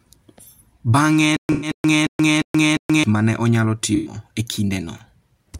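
A stall, likely in the player or stream, produces a stutter with silent gaps from 1.37 to 3.04 s. A 225 ms fragment of speech repeats five times, each followed by 126 ms of digital silence, a 351 ms cycle, before "ma ne onyalo" resumes. The speech belonging to that stretch is lost. Within it, from 1.52 to 1.71 s, and again just after "ma ne onyalo" from 3.95 to 4.14 s, AAC frame loss with concealment sets in. About 107 ms of coded audio goes missing each time, which fits roughly five dropped frames. The decoder rebuilds it from the last good spectrum, leaving a smeared, noisy patch.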